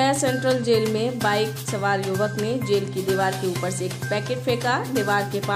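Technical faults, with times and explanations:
No technical faults can be heard anywhere in the clip. There is nothing to list with a time or an explanation.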